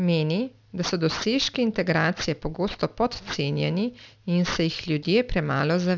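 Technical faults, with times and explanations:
Throughout, aliasing: the speech has a gritty, metallic edge on sibilants and other bright sounds. The audio appears to have been brought down to a 12 kHz rate without first filtering out content above 6 kHz. That high-frequency energy folds back around 6 kHz onto unrelated, lower frequencies. The folded components sit roughly 15 dB below the signal, loud enough to hear as harshness. The spectrum runs full right up to the 6 kHz edge.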